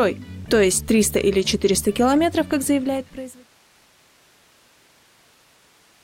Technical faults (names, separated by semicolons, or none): none